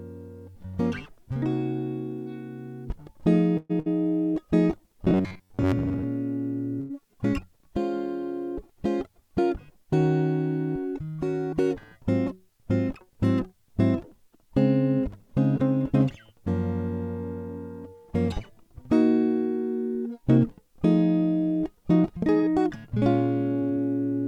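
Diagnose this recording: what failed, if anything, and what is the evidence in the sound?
Network stage, call audio freeze: from 3.57 to 3.71 s the music stalls into a fading fill for about 121 ms, then resumes exactly where it stopped, likely delayed packets rather than loss.

Network stage, burst of packet loss: fades at 3.79 s and 6.80 s lose about 60 ms and 100 ms of music, which jumps ahead instead of resuming where it stopped, as it does in a freeze.

Driver or buffer stage, robotic sound from repeated short buffers: from 5.04 to 6.05 s a rigid 93.8 Hz buzz is imposed on the music. Roughly half the audio is repeated, likely from a 10.7 ms buffer.

Call-processing stage, jitter buffer speed-up: from 22.03 to 22.96 s the music runs at 107% speed with pitch unchanged, unlike a sample-rate error, as about 70 ms is trimmed out.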